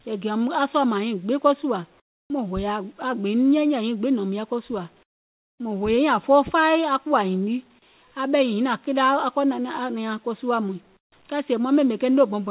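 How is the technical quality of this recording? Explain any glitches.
The recording has three short patches of comfort noise in place of the background, heard over narrowband call audio with nothing above 4 kHz. They fall at 2.0 to 2.3 s after "ko sùȧ", at 5.03 to 5.6 s after "nɔ̀ùm yɛi ko sùȧ", and at 10.97 to 11.12 s after "ko suȧ muìŋ". The likely cause is discontinuous transmission: the sender stopped transmitting in these pauses, and the receiver filled them with synthetic noise. The faint real background, about 38 dB below the loudest sound, becomes a flat, featureless hiss that drops by about 6, 16 and 24 dB in turn.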